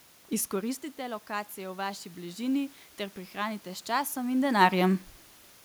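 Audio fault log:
0.5–2.8 s, automatic gain rising: after the talker moves back and input falls about 13 dB, gain climbs about 5 dB. Voice and room noise floor swell together, and the waveform envelope widens slowly.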